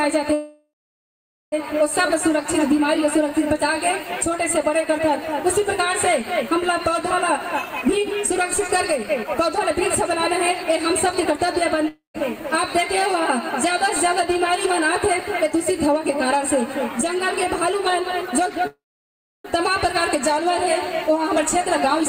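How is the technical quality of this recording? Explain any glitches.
The recording has repeated transmission glitches: two stalls, two hurried passages and one short loss of audio.

Call audio freezes occur at 0.33 to 1.54 s and 18.67 to 19.46 s. Each time the sound stretches into a fading buzz, then goes quiet for about 0.84 s and 0.67 s respectively. The audio then resumes exactly where it stopped, so nothing is lost, but it now runs about 1.19 s and 0.77 s later. This is likely delayed packets draining the jitter buffer.

Jitter buffer speed-ups run from 7.40 to 11.35 s and from 17.70 to 18.64 s. In both stretches the audio sounds rushed but keeps its pitch, playing at 111% and then 116% of normal speed. After a backlog built up, the receiver repeatedly trimmed pitch-period-sized slices to shrink the delay, cutting roughly 0.4 s in the first passage and about 0.15 s in the second.

A long network dropout spans 11.88 to 12.16 s. 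The last sound smears into a decaying buzz, then about 0.13 s of silence, and playback resumes with about 0.26 s of audio permanently absent. This was likely a run of packets that never arrived, so the concealment could only fill the hole, not recover its content.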